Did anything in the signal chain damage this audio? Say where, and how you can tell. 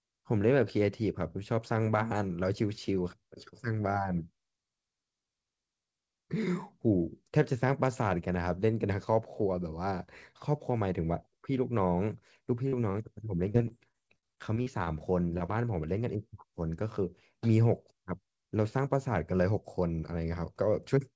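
Yes, the damage happens in the network stage of this speech call, downstream of a wideband codec whose spectrum stops dead at 8 kHz.

Short concealed packet loss occurs at 12.68–12.74 s, 15.38–15.42 s and 15.46–15.50 s. About 40 ms goes missing in the first case and about 20 ms in each of the other two. The decoder papered over each hole by extending the preceding sound, so you hear a quick smear or wobble. On a spectrogram, harmonics run flat and slightly blurred across the gap. On the waveform, the cycles repeat suspiciously before the real signal resumes.

A short stall from a late packet appears at 12.92–12.96 s. The packet arrived about 21 ms late, the jitter buffer ran dry, and the receiver stretched the current sound to bridge the wait. Nothing is actually lost, but one sound is held too long, with a faint buzz or dip. A spectrogram shows a frozen, elongated frame without a matching hole afterward. 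The waveform shows a small stretch of repeated periods before playback continues from the same point.

Repeated packet loss (robotic sound) spans 13.52–15.02 s. Roughly a dozen dropouts strike in quick succession, the longest about 43 ms, together losing around 200 ms, with about a sixth of that stretch concealed. Each patch continues the last sound, then the next loss arrives, so the audio turns choppy, with pieces missing. On a spectrogram, the stretch looks like a comb of frozen, smeared frames. On the waveform, brief repeated cycles break up the envelope throughout.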